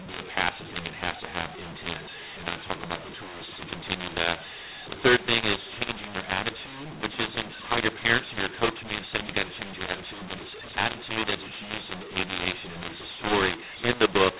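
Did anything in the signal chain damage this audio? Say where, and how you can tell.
Yes. A mu-law and A-law mix-up runs throughout the speech, at the codec stage: the G.711 stream was written as A-law, but the decoder read it as mu-law. Because the two laws map their 8-bit codes onto different logarithmic curves, every sample lands at the wrong level, some too loud, some too soft. The speech sounds harsh and distorted, and the pauses fill with noise instead of silence. The telephone band itself is intact, stopping at 4 kHz as 8 kHz A-law coding should.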